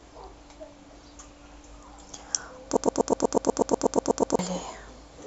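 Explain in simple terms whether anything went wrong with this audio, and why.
Something in the playback or streaming chain most likely stalled at about 2.77 seconds and, instead of moving on, kept resending the last tiny scrap of speech it held. That produces a broken-record loop: a clip of about 0.12 seconds repeats exactly, back to back, thirteen times, until 4.39 seconds. Whatever should have been said during that stretch is simply missing.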